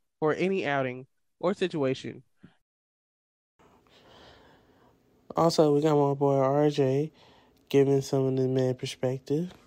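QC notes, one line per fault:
No technical faults can be heard anywhere in the signal, which carries the speech with nothing in its level, continuity or tone calling for correction.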